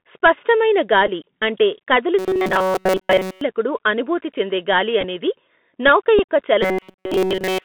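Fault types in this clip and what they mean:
Bluetooth CVSD headset codec: The speech went through the narrowband Bluetooth headset path, where a one-bit delta coder at a rate that fits 64 kbps tracks the waveform up or down with an adapting step. Everything is confined to roughly 200 Hz to 3.6 kHz for the whole clip, so the sound is thin and boxy. The codec damage is plainly audible: s sounds turn scratchy, loud bright moments distort as they outrun the step, and a granular hiss sits underneath.
Bluetooth headset packet repeated: Voice packets between headset and phone were lost, and the chip decoded the previous packet's bits again in their place. At 1.07 to 1.09 s about 11.2 ms was covered this way, fitting three repeated 3.75 ms packets, which gives a brief rough patch. At 5.01 to 5.05 s a similar 11.2 ms is scattered over 30 ms as small ticks, and at 6.19 s about 7.5 ms of repeats leaves another short glitch.
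Robotic sound from repeated short buffers: Fresh audio likely stopped arriving in time, so the software kept replaying its last short buffer while skipping the real signal. The repeat rate stamps a fixed pitch on the sound, a buzz at 188 Hz that fits a buffer of about 5.3 ms. From 2.19 to 3.41 s and again from 6.63 s to the end, nearly all of the sound becomes a rigid metallic drone that only loosely follows the speech.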